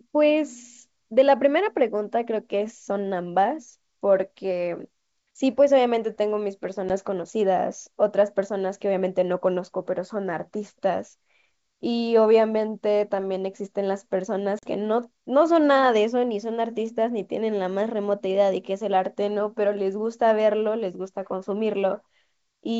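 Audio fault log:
6.9 s and 14.59 to 14.66 s, packet loss on an ADPCM call: the speech drops into a sharp-edged gap, brief at 6.9 s and about 40 ms at 14.6 s, which fits roughly four packets. The decoder's predictor and step size lose track of the sender's, so the speech comes back with a bit of distortion, then settles within a few tens of milliseconds. Underneath, the G.722 wideband coding itself sounds clean, with little or no audible codec damage.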